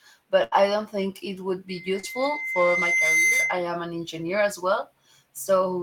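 At 0.43 s a burst of packet loss hits the speech. Several packets in a row failed to arrive. The receiver stretched the last sound for about 80 ms and let it fade. Speech resumes at 0.55 s, with a similar stretch skipped.

At 1.68 s a loudspeaker feedback squeal begins. The microphone is hearing its own loudspeaker, and the loop runs away at 2.1 kHz. The tone swells over roughly a second and a half. It ends up a little louder than the speech, then stops at 3.73 s.

Inside the squeal, short concealed packet loss occurs twice, at 2.00 s and 3.27 s. Each time about 40 ms never reached the decoder. The receiver patched the hole by extending the last sound for 35 to 42 ms. Each one is a brief smear before normal audio returns.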